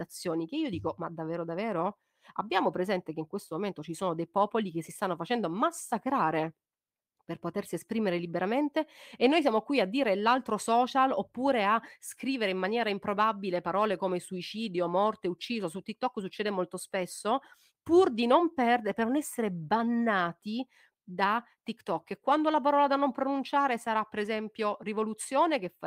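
No technical faults turn up anywhere in the recording, and none call for attention.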